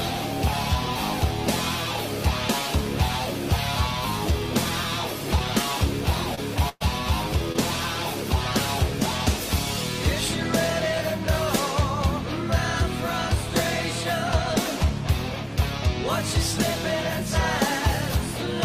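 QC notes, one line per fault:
6.35 to 6.39 s and 7.52 to 7.56 s, short concealed packet loss: each time about 20 ms of audio failed to reach the decoder in time. The receiver filled the gap with roughly 20 ms of the preceding sound, extended from its pitch or as shaped noise, and then crossfaded back into the real signal. The result is a brief smear or wobble.
6.69 to 6.82 s, burst of packet loss: about 120 ms of consecutive audio was lost or arrived too late to play. The receiver carried the last sound forward for about 114 ms and faded it as the gap continued, so it turns into a held buzz or a dying hiss. It then drops to silence for about 10 ms before playback resumes further along, with the missing stretch skipped entirely.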